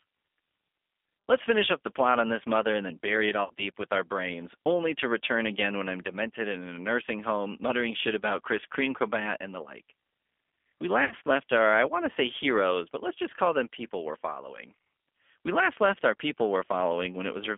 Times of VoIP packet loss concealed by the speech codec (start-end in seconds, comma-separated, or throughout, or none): 3.44-3.51, 11.05-11.14